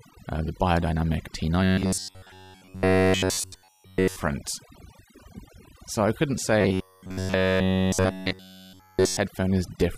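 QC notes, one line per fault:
Throughout: overdone noise removal. A noise reducer set far too hard cuts individual frequency bands whenever they sit near its noise estimate, taking the quiet parts of the voice along, so the background drops and breaks up into twinkling specks.
1.64–4.16 s and 6.61–9.17 s: robotic sound from repeated short buffers. The likely cause is audio arriving too seldom, so the last short slice, about 10.7 ms, is looped while fresh audio is skipped, across essentially the whole stretch. That forces a rigid, metallic 93.8 Hz buzz loosely tracking the speech, starting right after "uh the biodynamic" and again after "I couldn't".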